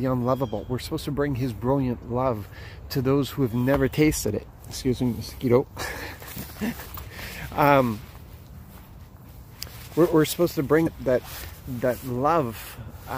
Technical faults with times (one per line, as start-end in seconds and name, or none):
2.00-2.03 damaged data in a compressed stream
10.83-10.87 damaged data in a compressed stream